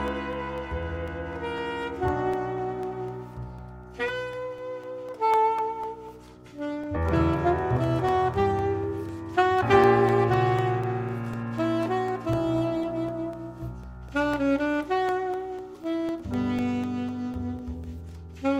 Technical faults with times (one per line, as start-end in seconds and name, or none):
0.08-18.34 periodic USB or driver dropouts